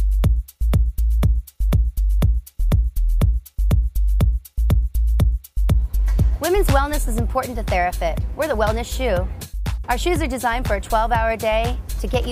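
No audible faults anywhere in the clip.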